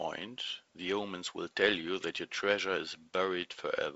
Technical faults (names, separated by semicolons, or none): none